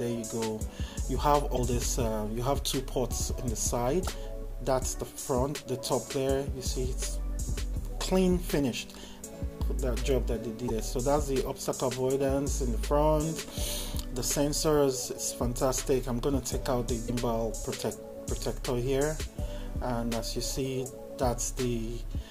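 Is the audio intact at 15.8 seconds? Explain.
Yes, the audio is intact at 15.8 seconds, with no dropout, click, distortion or other fault at that moment.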